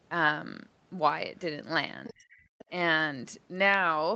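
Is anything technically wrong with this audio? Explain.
Yes. An echo canceller that likely failed to fully remove loudspeaker pickup lets the other side's voice leak through in brief faint scraps at 2.04–2.13 s, 2.31–2.39 s and 2.58–2.65 s, roughly 20 to 30 dB below the talker. Because both sides likely spoke at once, the canceller also suppressed speech in double talk from 2.1 to 2.28 s, pulling the talker's voice down by around 30 dB in a dip.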